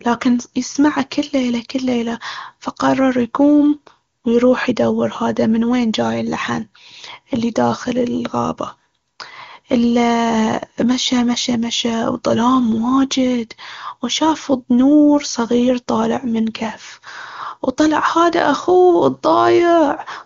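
No faults: the speech has the full 7 kHz band and clear texture of AMR-WB (HD Voice) at its upper rates, consistent with about 23.85 kbit/s.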